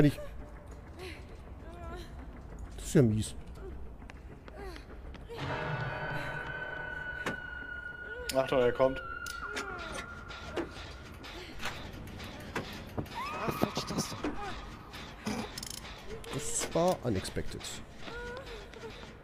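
No faults can be heard anywhere in the audio.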